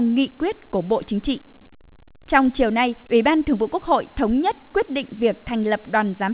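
No faults are audible in the speech, which has passed through a WebRTC call path with band-limited, telephone-quality audio and nothing above 4 kHz, consistent with G.711 A-law at 64 kbps.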